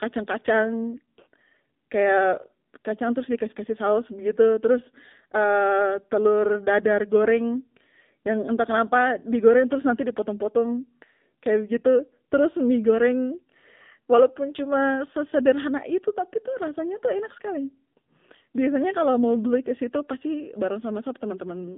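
The speech has been squeezed through the AMR narrowband mobile codec for the whole clip. It is coded as a vocal-tract model excited by sparse pulses at a low bit rate, which fits the 7.4 kbps AMR-NB mode. The band is confined to roughly 150 Hz to 3.6 kHz, with nothing above 3.6 kHz, so the voice sounds boxy and telephone-thin. The coding damage is plainly audible as a buzzy, synthetic edge on the voice.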